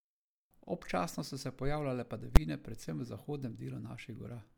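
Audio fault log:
2.36 s, invalid numbers at full scale. Between "so se pojavljale" and "predvsem v" the speech is replaced by a single loud bang. A calculation produced infinite or invalid values. These were forced to the largest possible sample value. The output held one extreme value, far beyond the speech peaks, for one short block of about 11 ms, which fits a 512-sample block. That block is too brief to hear its start and end as separate pops. The jump to that extreme and back merges into one sharp crack.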